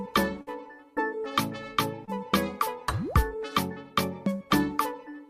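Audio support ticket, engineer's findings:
Held, fading continuation of the sound at 0.41–0.49 s, then a jump ahead. Burst of packet loss on the receive path: about 60 ms never arrived, concealment stretched the last audio about 52 ms while attenuating, and playback resumed with the interval skipped.

Brief smear or wobble at 2.05–2.09 s. Short concealed packet loss in the jitter buffer/decoder stage: 20 ms went missing and was bridged by 28 ms of synthesized continuation from the preceding sound, crossfaded back into the real stream.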